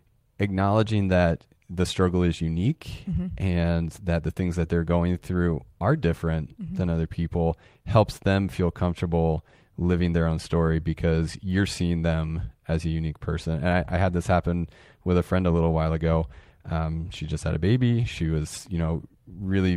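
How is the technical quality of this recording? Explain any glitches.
No glitches or technical faults are audible anywhere here.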